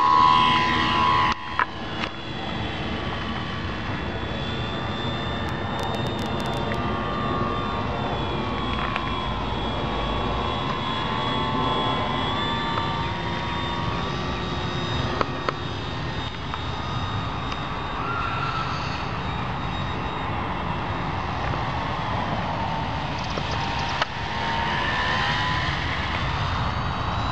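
A train of clicks runs from 5.49 to 6.75 s: about fifteen sharp, similar pulses at an uneven pace averaging 9.6 per second, peaking about 15 dB above the sound. Something is injecting pulses, likely interference or a faulty connection or power supply, heard as irregular ticking.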